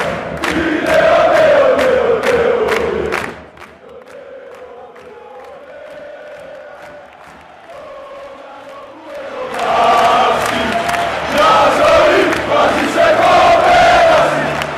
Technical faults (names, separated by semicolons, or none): none